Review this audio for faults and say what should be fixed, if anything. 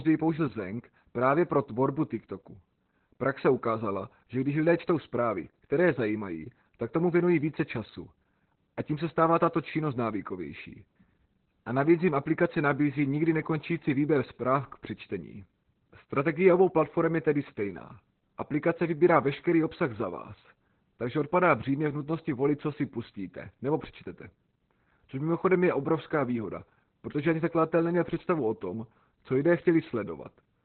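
Opus voice compression is present throughout. The speech is muffled, hoarse and slightly robotic, with nothing above 4.2 kHz, which fits narrowband SILK at around 8 kbps. A plain low-pass filter would only dull the sound, but here the coarse excitation coding also adds rasp. To prevent this, encode at a higher bitrate so that Opus keeps wideband audio.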